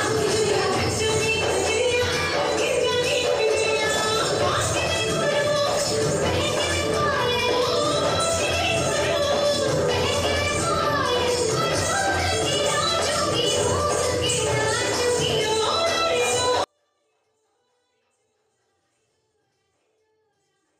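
At 16.64 s the level falls by about 48 dB at once and stays there to the end, clean but nearly inaudible. This is a 24-bit alignment error (too quiet): 24-bit samples sitting in the low bytes of 32-bit words are read as full 32-bit integers.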